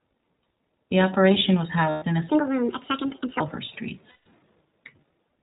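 The whole clip of speech carries the sound of the iLBC codec, and the damage is plainly audible. Everything above 4 kHz is gone, so the voice sounds boxed-in and narrowband, with a slightly rough, synthetic edge. Each short frame's excitation is coded on its own, and the texture points to the 20 ms, 15.2 kbps mode rather than the 30 ms one.

Between "operation was" and "in a", from 1.90 to 2.04 s, there's a 120 ms hole from lost iLBC frames. The decoder covers it by repeating the last pitch cycle with some noise mixed in, so you hear a held, faintly buzzy vowel instead of the real sound. Because iLBC frames don't depend on each other, the voice snaps back cleanly right after.

Straight after "in a", from 2.29 to 3.40 s, a section plays at the wrong speed: 1.61 times too fast, which lifts the pitch by roughly seven semitones. Speed and pitch jump together, so the voice turns high and hurried and then drops back to normal at the end. 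That's likely a clock mismatch in whatever played or edited that stretch.

Then from 4.10 to 4.26 s there's a second run of lost iLBC frames, 160 ms this time. The same buzzy, sustained vowel fills the gap, fading slightly over its longer length before the voice picks up cleanly again.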